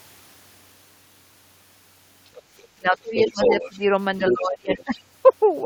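At 2.36 to 2.42 s and 2.58 to 2.68 s the other side's voice is leaking through: brief, faint scraps roughly 25 and 35 dB below the main speech. These likely come from a loudspeaker echo that the echo canceller left behind. On a spectrogram they appear as weak, thin harmonic traces sitting apart from the talker's energy.

From 2.77 to 3.84 s the speech is suppressed in double talk. The talker's level dips in pieces, by up to about 20 dB, for roughly 0.7 s in total. The cause is likely an echo canceller that turned down everything while both sides spoke. The waveform shows ragged, hollowed-out stretches. Within that stretch, from 3.17 to 3.78 s, the leaked voice rises to roughly the same level as the talker, and two sets of harmonics overlap.

A second suppression runs from 4.19 to 4.93 s. The drops reach about 25 dB and cover roughly half a second, with the same chopped envelope. Leakage reappears during it at 4.28 to 4.34 s, about 5 dB down, and from 4.7 to 5.0 s, about 10 dB down. 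It sounds like a second voice intruding while the main one fades.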